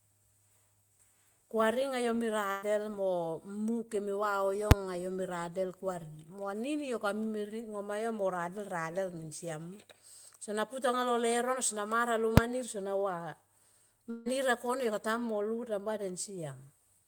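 From 2.51 to 2.65 s there is a burst of packet loss. Several packets in a row never arrived in time, and the receiver stretched the last sound across roughly 110 ms, fading it down, before playback resumed about 120 ms further on. It sounds like a brief held buzz or fading hiss followed by a small jump in the speech. On a spectrogram the last sound freezes into a flat, static pattern that dims toward the splice. The waveform shows a decaying continuation with no true silence.

At 4.71 s, invalid numbers at full scale produce a sharp bang. A calculation returned infinite or invalid values, and they were pinned to the maximum level for about 5.3 ms, which fits a 256-sample processing block. The waveform shows a flat rectangle far beyond the speech peaks. On the spectrogram it appears as a bright vertical stripe spanning every frequency.

At 12.37 s the same fault returns as a shorter single crack. 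This time the block lasts about 2.7 ms, which points to a 128-sample block. It leaves a narrower flat plateau and a thinner broadband stripe.

From 14.10 to 14.28 s there is a long network dropout, likely caused by a stall in the connection. The last sound is carried on as a fading buzz or hiss for about 151 ms, and the stream then picks up with roughly 160 ms of speech gone. No fully silent stretch is left. On the spectrogram this shows as a smeared, static pattern that thins out before the speech abruptly restarts.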